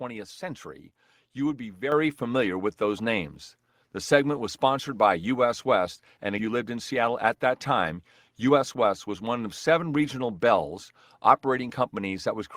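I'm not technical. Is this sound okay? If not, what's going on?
No. There are three problems.

At 1.92 s, the microphone volume stepped up. The call software decided the microphone was too quiet and turned it up all at once. The speech and the background noise both get suddenly louder at the same moment.

From 6.17 s to 9.22 s, there is a jitter buffer speed-up. Audio had piled up waiting to play. To catch up, the receiver cut out many tiny slices. Altogether, about a fifth of a second went missing. The speech runs about 7 percent fast but keeps its normal pitch, so it sounds slightly rushed.

At 6.38 s, there is a skip ahead. Well over half a second of audio was thrown away while later sound was already waiting. Playback jumps straight forward with no silence. The sound on either side of the jump is joined almost directly.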